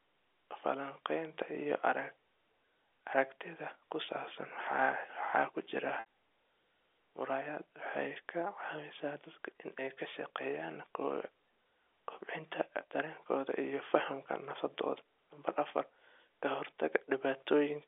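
At 6.0 to 6.05 s there is packet loss with pitch repetition. About 60 ms of signal went missing, which fits three 20 ms packets. The receiver filled the hole by looping the last pitch period and fading it down, so the speech briefly freezes into a held, buzzy tone before resuming. Unlike a stutter, no larger chunk of speech is replayed. The narrowband G.711 telephone line around it is audible as the band limit.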